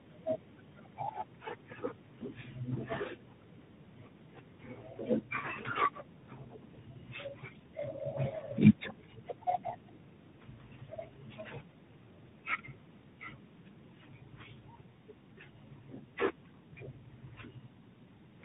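From start to finish, the speech carries tandem speech coding. It sounds as though it passed through two speech codecs in a row, with a plain telephone link in between. The second coder, likely CVSD, had to work on audio the first had already degraded. So the damage compounds. Nothing is left above about 3.8 kHz, which makes it muffled. The texture is rough and grainy. The speech carries a warble.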